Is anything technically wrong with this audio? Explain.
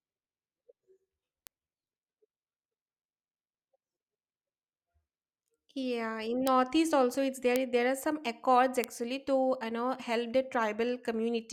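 Yes, there are four bit error spikes in this speech, at 1.47, 6.47, 7.56 and 8.84 s. Each is a single corrupted sample, a flipped bit that knocks the value up by a power of two and straight back, reaching about -18 dBFS for the first and about -6 dBFS for the rest. Each one is a sharp broadband tick with no relation to the speech.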